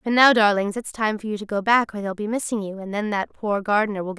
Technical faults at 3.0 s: none

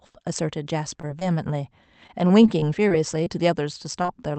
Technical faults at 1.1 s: short stall from a late packet; short concealed packet loss

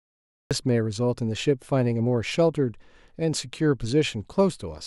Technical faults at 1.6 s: none

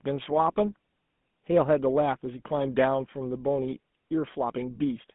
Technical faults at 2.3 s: GSM full-rate codec

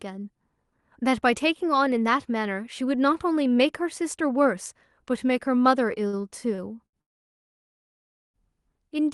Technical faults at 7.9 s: call audio freeze

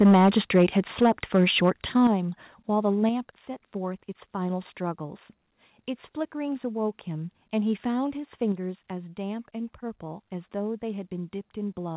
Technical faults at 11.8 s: none

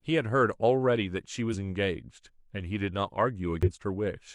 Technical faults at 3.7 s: damaged data in a compressed stream

